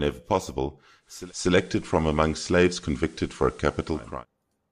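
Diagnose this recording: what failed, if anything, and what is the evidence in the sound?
Digital radio blending to analogue at the receiver: from 0.99 s to 4.25 s the speech cross-fades over 332 ms to the FM signal, shifting level by about 3 dB and gaining hiss some 30 dB down. The hiss and smooth blend distinguish it from a codec bandwidth drop.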